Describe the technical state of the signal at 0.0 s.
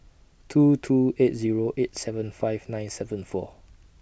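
At 0.0 s the speech signal is intact, with no audible fault present at that moment.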